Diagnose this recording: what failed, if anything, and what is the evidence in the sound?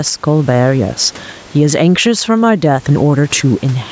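Gain pumping at the call-processing stage runs throughout. The gain swings about 10 dB, pulling down on loud syllables and flattening the waveform envelope. The likely cause is excessive input gain into a fast limiter.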